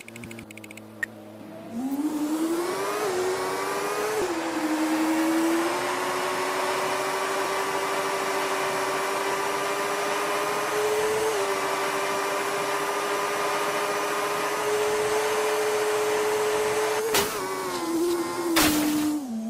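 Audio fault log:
0.43–0.45 s, skip ahead: playback jumps forward with nothing filled in, so about 400 ms of audio never plays and the two sides butt together almost directly. The lost stretch was dropped in transit or discarded by an overflowing jitter buffer while later audio was already queued. On a waveform the envelope changes abruptly at the join with no silent gap. On a spectrogram the harmonic pattern breaks off and resumes mid-shape, with a thin vertical seam where the content fails to line up.
0.53–1.39 s, jitter buffer speed-up: the receiver was holding more audio than its target and worked the excess down by snipping out short pieces one or a few pitch periods long, over and over. Across this span playback runs at 112% speed, about 100 ms shorter in total, with pitch unchanged, so it sounds hurried. A spectrogram shows harmonics at normal spacing but time-compressed events, sometimes with faint periodic discontinuities. 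On the waveform, cycles are missing at the splice points while the cycle length stays the same.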